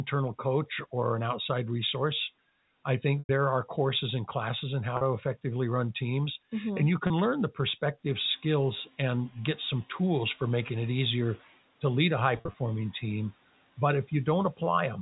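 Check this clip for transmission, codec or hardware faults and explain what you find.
There is one transmission fault: packet loss with pitch repetition, in four places. Missing audio is bridged by looping the last pitch period and fading it out. The 100 ms gap at 3.19–3.29 s, between "an outside resource I" and "there are courses and", fades toward silence. The 40 ms gap at 4.97–5.01 s after "courses and classes in" and the 30 ms one at 7.07–7.10 s sound like brief buzzy holds. At 12.36–12.54 s, after "to lead a high", short dropouts of up to 40 ms are scattered across 180 ms, giving brief buzzy holds.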